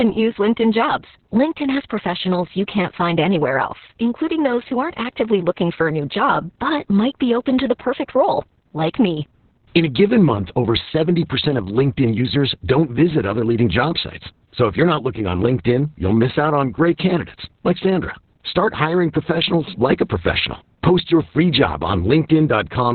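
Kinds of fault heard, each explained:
Opus voice compression, throughout: the speech is confined to narrowband, with nothing above about 4 kHz, and its excitation is coded coarsely by the linear-prediction coder. It sounds heavily muffled, hoarse and faintly robotic, which fits SILK at roughly 6 kbps.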